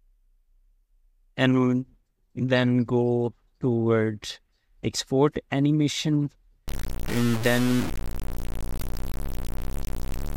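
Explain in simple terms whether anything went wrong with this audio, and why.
From 6.68 s to the end, the sound turns grainy and gritty. That is likely low bit depth without dither, which fits about 4 bits.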